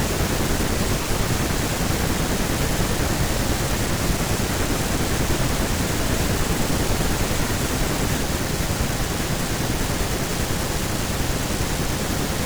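No technical faults can be heard anywhere in the recording.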